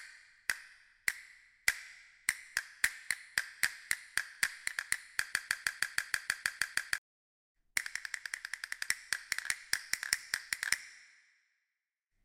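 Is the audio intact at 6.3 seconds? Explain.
No. From 5.33 to 6.98 s a broken-record loop repeats one 158 ms fragment ten times back to back, likely because playback or the stream stalled and resent its last buffer. The waveform and spectrogram show identical blocks recurring every 0.16 s, and the real audio there is lost.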